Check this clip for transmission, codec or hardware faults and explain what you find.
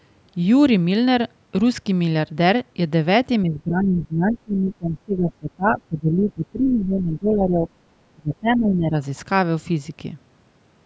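The speech is pulled down twice, from 3.43 to 7.69 s and again from 8.13 to 8.95 s, with the deepest dips around 20 dB. This is most likely speech suppressed in double talk. The echo canceller could not tell this talker apart from loudspeaker echo while both ends spoke at once, so it attenuated everything. The voice sinks and partly drops out through most of the first stretch and for under a second in the second, then recovers.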